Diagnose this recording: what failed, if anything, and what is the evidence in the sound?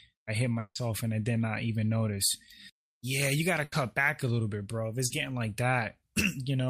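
Long network dropout, likely a network stall, from 0.59 to 0.83 s after "i hit": the concealment buzz or hiss fades into about 60 ms of flat, near-empty waveform before "and i did not".

Burst of packet loss at the network stage, 3.64 to 3.74 s, after "yeah you gotta": 80 ms of smeared, decaying fill on a spectrogram, then "back a little bit" resumes.

Short concealed packet loss, 5.06 to 5.12 s, after "little bit bro if": a 40 ms blurred patch of continued sound, heard as a brief wobble, before "getting like".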